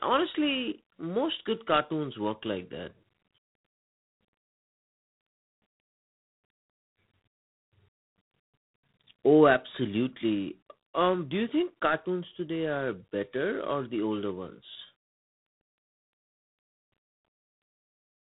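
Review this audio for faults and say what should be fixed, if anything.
G.726 ADPCM coding throughout: a rasping hiss rides on the speech level and nothing passes above 3.8 kHz, which fits about 3 bits a sample at 24 kbit/s. Use 32 kbit/s or a wideband codec.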